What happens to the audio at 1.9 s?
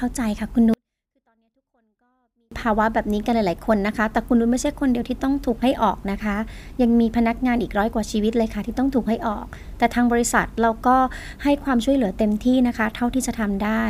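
At 1.9 s the speech is in the middle of a 24-bit alignment error, running from about 0.74 to 2.52 s. The samples were stored as 24-bit values in the low bytes of a 32-bit word but read back as full 32-bit integers, so everything lands about 48 dB down. The speech stays clean and undistorted but suddenly becomes almost inaudible, then snaps back to normal level once the span ends.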